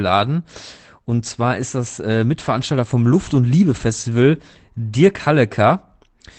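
No technical faults are audible in the speech, which carries the ordinary character of a WebRTC call path whose codec limits the top end to around 8 kHz, consistent with a wideband Opus setting at a moderate bitrate.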